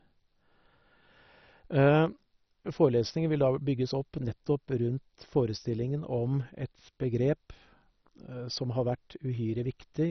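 From start to finish the speech sounds dull and gurgling, with a granular roughness and nothing above about 6.1 kHz. This is likely MP2 compression at a low bitrate, around 32 kbps. Layer II divides the signal into 32 sub-bands and shares out a small bit budget; the upper bands receive none and vanish, while the remaining bands flicker and are coarsely quantised. The damage is heavy, giving that familiar low-rate digital radio character.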